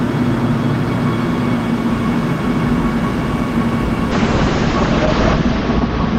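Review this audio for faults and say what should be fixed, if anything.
A call bitrate drop starts at 4.13 s and lasts to the end at 6.19 s. The audio turns rough and muffled, consistent with the encoder falling from roughly 48 kbps to about 7 kbps. A spectrogram shows the top band cut from 20 kHz to 8 kHz, and the coarsest stretch lasts about 1.2 s. To prevent it, give the link more headroom and smooth bandwidth-estimate swings so the encoder is not forced into such low rates.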